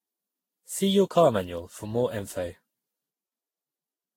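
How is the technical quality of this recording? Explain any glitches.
The technical quality is poor throughout the speech. Generation loss runs the whole length: the sound is swirly, smeared and hollow, consonant attacks are blurred, and nothing is left above 16.6 kHz. The likely cause is repeated lossy encoding, around ten passes through a codec such as Vorbis at roughly 50 kbit/s, each re-quantising on a shifted frame grid so noise piles up. What separates it from a single low-bitrate encode is that the damage is heavier than that bitrate alone would produce.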